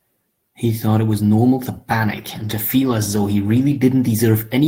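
From 1.95 s to the end, a call bitrate drop makes the speech rougher and more watery, which fits the encoder falling from about 32 to 15 kbps and staying at its lowest for 1.23 s. A spectrogram would show the upper band thinning and smearing.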